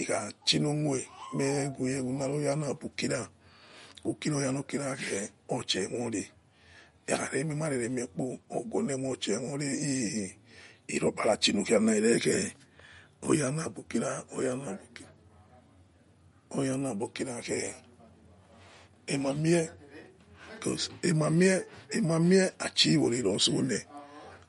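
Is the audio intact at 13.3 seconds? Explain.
No. At 13.3 s the speech carries MP3 compression damage that runs through the whole clip, likely from an encoder starved of bits, which fits a low bitrate around 48 kbps. Nothing survives above 11.2 kHz, so a spectrogram shows a flat ceiling there, with weak bands flickering on and off below it. The result sounds watery and swirly, with chirpy s sounds and smeared attacks.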